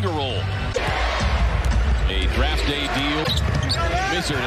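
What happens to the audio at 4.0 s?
Nothing goes wrong at 4.0 s; the audio plays through that moment intact, with no dropout, click or distortion.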